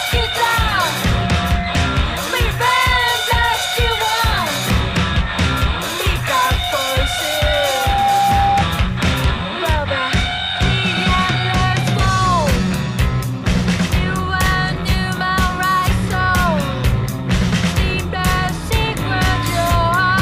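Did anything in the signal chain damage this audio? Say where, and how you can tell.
Yes: a loudspeaker feedback squeal from the playback loudspeaker looping into the microphone rings a 798 Hz tone from 7.25 to 8.64 s, swelling over about 0.7 s to roughly 5 dB above the sound.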